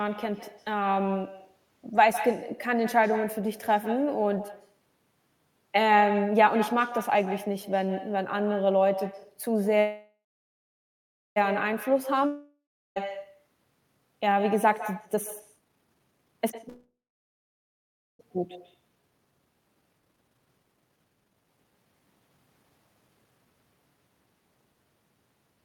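Echo with no canceller runs through the whole call. The far end's loudspeaker feeds its microphone, and nothing removes that sound, so every phrase returns roughly 150 ms later as a thinner copy about 12 dB quieter than the direct speech.

A call audio freeze at 9.79 to 11.38 s stops the speech for 1.57 s. The last sound is stretched into a fading buzz, then about 1.17 s of silence. The likely cause is delayed packets draining the jitter buffer, and speech resumes exactly where it stopped, with nothing lost.

A long network dropout at 12.26 to 12.98 s behaves differently. The last sound decays over the first part, then about 0.35 s of silence follows, and when speech returns about 0.7 s of it is gone, likely because that audio never arrived.

Jitter buffer speed-up at 15.05 to 16.69 s makes speech rush at 169% of normal speed while the pitch stays the same. The receiver is cutting out tiny pitch-period slices to shed excess buffered delay, removing roughly a second in all.

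A second call audio freeze follows immediately at 16.69 to 18.21 s. It lasts 1.5 s, with about 1.28 s of silence after the fading buzz, and then speech continues intact.

Jitter buffer speed-up returns from 18.35 to 23.46 s at 138% of normal speed, hurried but at the same pitch, as roughly two seconds of backlog is trimmed away.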